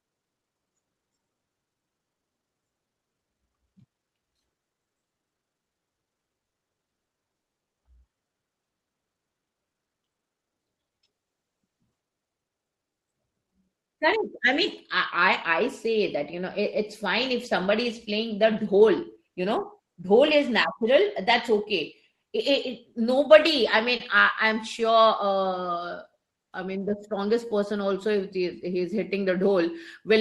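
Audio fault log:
6.39–7.09 s, repeated stalls (stutter): the speech catches three times in under a second, with about 270 ms of held-over sound in all and the longest hold about 190 ms, so nearly 40 percent of that stretch is filled rather than real. Nothing is lost; the late packets simply left the jitter buffer empty again and again, and each time the last sound was extended. Unlike a single freeze, this is a rapid series of short drags, heard as a stammer.
7.34–7.76 s, call audio freeze: the sound stops for about 390 ms of silence and then resumes exactly where it left off, pushing everything after it later by the same amount. The likely cause is packets held up in transit until the jitter buffer ran dry, with the receiver's fill fading fully to silence over so long a wait. It differs from the stutter just before it by being one clean, longer gap rather than repeated catches.
12.43–19.82 s, jitter buffer speed-up: across these seven or so seconds the speech runs about 7 percent fast while the pitch stays put. 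To shed excess buffered delay, the receiver cut out tiny pitch-period-sized slivers many times over, removing about half a second in total. What separates this from a plain tape-speed change is that voices keep their normal pitch; the delivery just sounds slightly rushed.
23.97 s, short stall from a late packet: a single sound is held about 30 ms too long, a brief smear or slight dip, before the speech carries on with nothing missing. One packet came late, the buffer briefly ran empty, and the last sound was stretched to cover. It is far shorter and isolated compared with the freeze and the stutter earlier.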